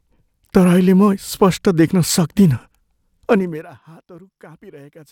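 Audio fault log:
3.33–3.71 s, zipper noise: the speech is turned down by roughly 25 dB, but the gain moves in discrete steps of about 2 dB, around fifty a second, with no smoothing between them. Each jump leaves a small discontinuity in the waveform that is heard as a click. At that rate the clicks merge into a fast ticking, zipping texture over the 0.38 s the fade lasts, and the texture stops once the gain settles.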